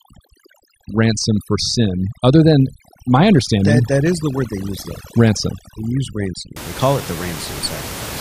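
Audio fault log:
0.00–6.56 s, overdone noise removal: the room noise, which sits only about 13 dB below the speech, has been attacked by a noise reducer set far too aggressively. Individual frequency bands that fall near its noise estimate are pulled down hard or switched off, so the background drops away and breaks up into twinkling, chirpy specks, and the softer parts of the speech are stripped out with it until just before "they call it the".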